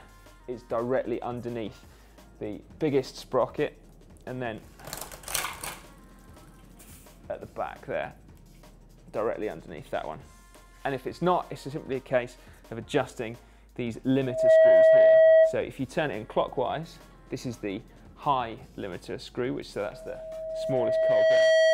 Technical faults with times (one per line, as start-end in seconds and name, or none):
14.22-15.61 loudspeaker feedback squeal
19.89-21.73 loudspeaker feedback squeal